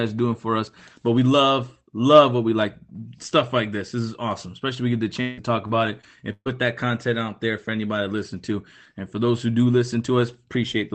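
From 5.21 to 6.49 s the speech turns choppy and robotic. This is repeated packet loss. Four gaps appear in quick succession, the longest 0.16 s. Each is patched by stretching the last sound. About a quarter of this stretch is filled in. The band stays limited to 8 kHz.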